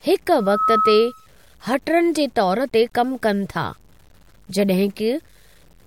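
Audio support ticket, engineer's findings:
Likely an 8-bit truncation stage with no dither somewhere in the chain, most probably a level or format conversion. Low bit depth without dither, throughout. Rounding error tracks the speech, so grainy distortion sits about 40 dB below the signal. Quiet syllables and decays turn gritty and sputter rather than fading smoothly.

Loudspeaker feedback squeal, 0.38 to 1.27 s. A mic is picking up its own monitor or PA, with loop gain above unity at 1.3 kHz. A single tone swells over roughly a third of a second to about speech level. It cuts out just before "हटरन जे तौर".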